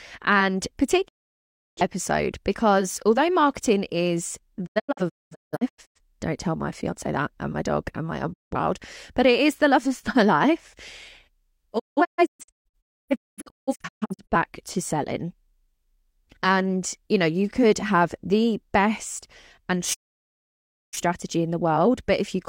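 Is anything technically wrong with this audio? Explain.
Yes, the speech suffers digital broadcast dropout at 1.07–1.81, 4.65–6.00, 8.32–8.56, 11.78–14.36 and 19.93–20.98 s. The receiver mutes on corrupted frames, so the sound drops out with a quick 20 ms fade. The 4.65 and 11.78 s stretches break into several short holes, and the missing audio never returns.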